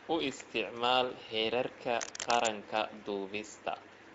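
From start to finish the speech carries plainly audible Speex codec damage: a hoarse, noisy roughness from a CELP coder that has too few bits to model the excitation cleanly. The degree of damage points to a middling setting, around 16.8 kbps.

From 2.01 to 2.49 s, cable scratch noise cuts in: dense, uneven bursts of scratching about as loud as the speech itself. The likely cause is a worn cable, connector or control being moved, making its contact resistance fluctuate rapidly.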